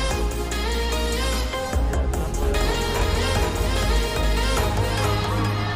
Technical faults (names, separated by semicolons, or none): doubled audio track